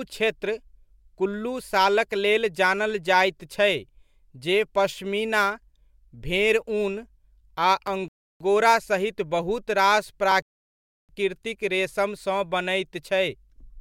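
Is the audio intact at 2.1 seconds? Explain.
Yes, the speech at 2.1 seconds plays through cleanly, with no audible fault at that moment.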